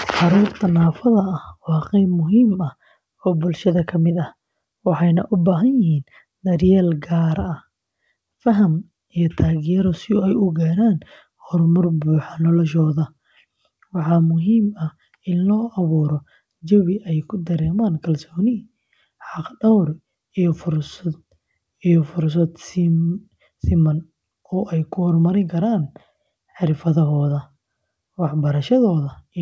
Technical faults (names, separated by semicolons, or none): none